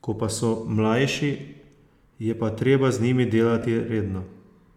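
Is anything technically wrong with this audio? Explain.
Yes. This speech has lost LE Audio frames at 1.12 to 1.16 s and at 3.62 s, just after "pa treba z njimi". The decoder repeated the last spectrum with random signs, giving brief noisy smears of about 30 ms and 15 ms.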